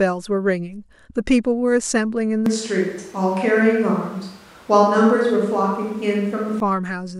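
From 2.46 s to 6.60 s the speech abruptly turns roomy, hollow and thin in the bass, then snaps back, the sign of a switch to a distant microphone, likely after the close one failed. Unlike added reverb or a bass cut, the room noise also rises, to about 30 dB below the speech, while loudness barely changes.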